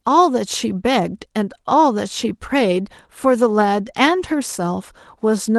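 No technical faults can be heard in this speech, which has the ordinary coding texture of a call path and a high end that stops at 12 kHz, consistent with the Opus codec used on it.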